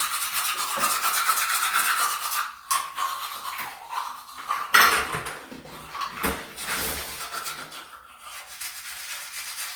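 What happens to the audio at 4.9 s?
At 4.9 s the audio shows generation loss, present throughout the clip rather than only at that moment. It has likely been decoded and re-encoded with a lossy codec around five times, each pass requantising on a shifted frame grid so errors stack. The sound is swirly, smeared and hollow beyond what a single Opus pass at roughly 48 kbit/s would leave, with blurred attacks and nothing above about 20.4 kHz.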